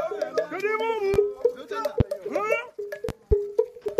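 A likely electrical disturbance, such as a switching transient or a driver glitch, puts sudden voltage pulses into the signal path, heard as a loud pop. The first, at 1.14 to 1.17 s, stands about 15 dB above the surrounding sound. A stronger one at 2.00 to 2.04 s peaks near 20 dB above it. From 3.09 to 3.35 s, two pops come in quick succession, again roughly 15 dB up. Each is a sharp crack, with the audio continuing underneath.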